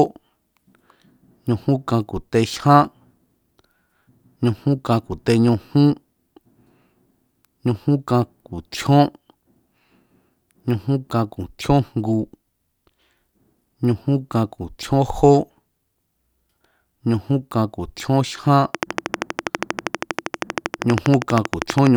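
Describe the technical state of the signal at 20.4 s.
At 20.4 s the speech sits under a train of clicks running from 18.75 s to 21.88 s. Sharp pulses of much the same shape arrive at a steady 12.5 per second, roughly forty in all, and peak well above the speech, so the ticking carries through pauses too. The likely cause is interference from nearby equipment or a faulty connection or power supply. The waveform shows evenly spaced spikes every 80 ms, and the spectrogram shows thin broadband vertical lines.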